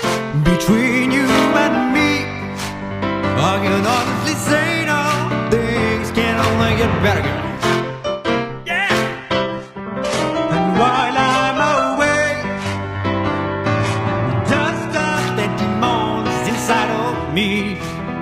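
The audio drops to an adaptive stream at a lower bitrate from 9.16 to 15.16 s. The treble turns synthetic and smeared, consistent with a very low-bitrate HE-AAC fallback, with no gap.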